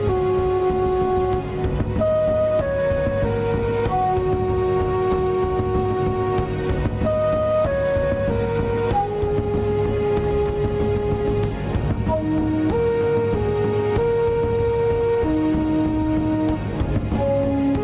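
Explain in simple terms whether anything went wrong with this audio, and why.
Gain pumping runs through the whole clip: the level dips modestly under each loud sound, likely from the level being set too high and a fast limiter reining it in. Unlike a noise gate, the background never drops to silence.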